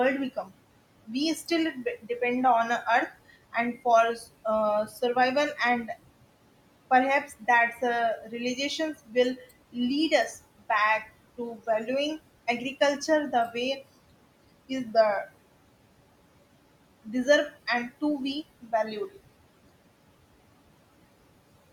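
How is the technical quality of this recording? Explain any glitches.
The recording is held back by its noise suppression, which works throughout and also eats into the speech in several places. The room noise underneath sits about 19 dB below the speech.

Noise suppressor artifacts run through the whole clip. The suppressor estimates which frequency bands hold steady noise and turns them down frame by frame, by about 18 dB here. Between phrases the background sinks away, then comes back up under the speech.

Speech cut by the noise suppressor occurs at 0.36–0.52 s, 1.06–2.1 s, 4.88–5.89 s, 7.27–9.76 s, 10.59–11.88 s and 18.62–19.17 s. In these spans the suppressor mistook quieter parts of the speech for noise and attenuated them along with the background, by about 7 dB at the mildest and about 16 dB at the deepest. Only brief fragments within each span are hit, a fraction of a second at most, and longest around 7.27–9.76 s. 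Soft consonants and word endings there sound swallowed or faded.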